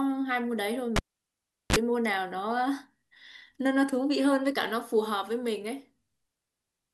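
At 0.96 s there's a cable pulled and plugged in: a pop, about 0.75 s of near silence, then a 34 ms burst of 50 Hz mains buzz before it reconnects at 1.76 s.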